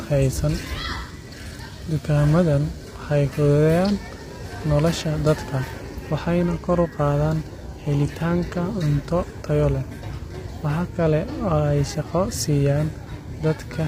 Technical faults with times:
0.00-13.87 low-delay AAC compression

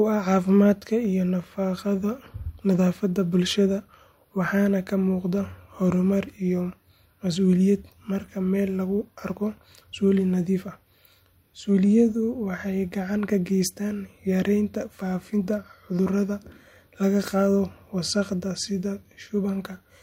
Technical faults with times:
none

